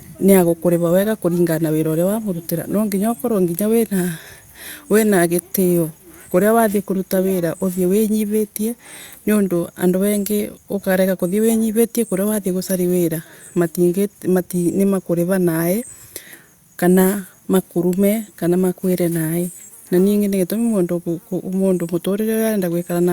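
No technical faults can be heard anywhere in this speech recording. Nothing in the audio calls for a timestamp or a repair.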